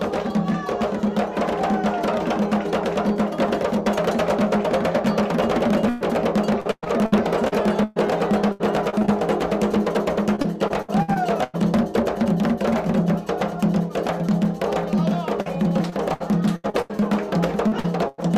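From 5.89 to 9.10 s, 10.36 to 11.56 s and 15.42 to 17.04 s, the sound turns choppy, with pieces dropping out. This is repeated packet loss (robotic sound). About a dozen holes fall in the first stretch, and roughly a fifth to a quarter of each stretch is patched by extending the previous sound. The longest hole lasts 120 ms.

At 17.68 s and again at 17.80 s there is a brief smear or wobble, each about 40 ms long. Each is a short concealed packet loss. The missing fragment was rebuilt from the sound just before it and then blended back into the real audio.

From 18.08 to 18.20 s, the last sound is held and fades before the audio jumps ahead. This is a burst of packet loss. About 100 ms never arrived, and the receiver stretched the last sound across the gap while turning it down.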